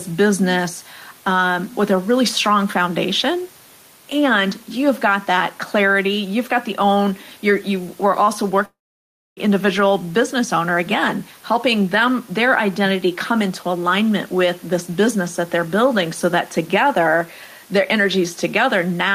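Gain pumping runs through the whole clip: the level breathes by about 5 dB. The likely cause is input gain set too high, with a fast limiter clamping each peak.

A long network dropout runs from 8.65 to 9.40 s, after "you're you were also". About 0.7 s of audio never arrived. The gap is filled with a brief fading tail of the last sound and then near-silence before "individual business owner again", a pattern that likely comes from the receiver concealing the lost packets.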